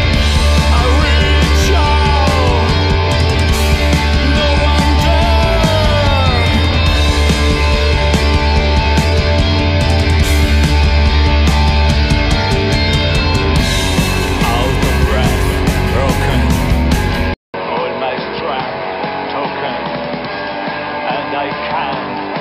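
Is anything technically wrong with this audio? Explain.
Yes. At 17.34 s, after a 200 ms gap, it goes dull and a bit quieter, tops out at 5.3 kHz, and picks up new background noise. That's likely the input switched to a poorer device.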